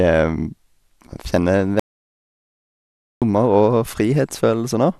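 Speech with an audio dropout to silence from 1.80 to 3.22 s, about 1.42 s lost. Unlike a natural pause or noise gate, it cuts abruptly mid-flow to total silence with no room tone, likely a lost input while recording continued.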